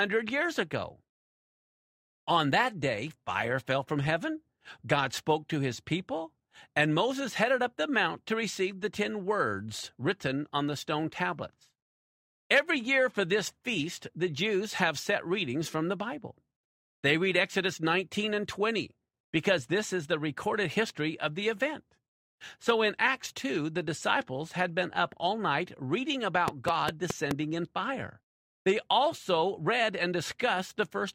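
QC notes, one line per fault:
26.48–27.32 s, train of clicks: a run of about five sharp ticks, evenly spaced at roughly 4.8 per second and peaking around 15 dB above the surrounding audio, so they stand out as a brief popping rhythm laid over the sound. Because each click has much the same shape and the pacing is regular, a repeating external pulse is the likely cause, such as electrical interference from nearby equipment or a faulty connection or power supply.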